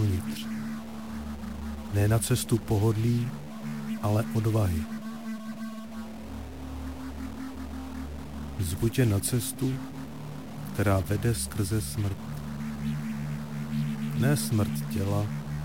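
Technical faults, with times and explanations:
Throughout, stuck bit: harsh, buzzy distortion, with hiss filling the pauses, likely from one data bit frozen in place, each error about -40 dBFS.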